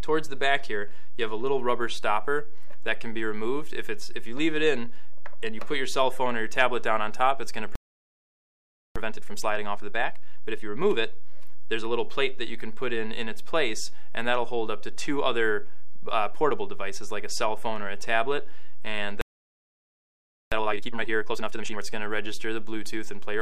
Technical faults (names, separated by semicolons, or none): playback stall; time-compressed catch-up